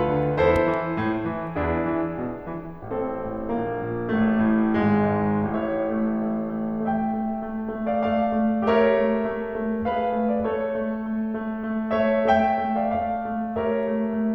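Music, with a loud pop made of two sharp thumps between 0.56 and 0.76 s, about 10 dB above the music playing on beneath them. A waveform shows two tall, narrow spikes; a spectrogram, two thin broadband vertical stripes. The likely cause is a voltage spike from a plug, switch or static.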